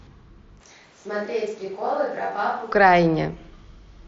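Short speech clip, band-limited to about 7.7 kHz as you'd get from an mSBC Bluetooth headset link. From 0.61 to 2.72 s the sound turns hollow and roomy, drops by around 10 dB, and lets room noise rise to roughly 30 dB under the speech, then snaps back. That's most likely a switch to a distant microphone, with the close mic's signal lost for that stretch.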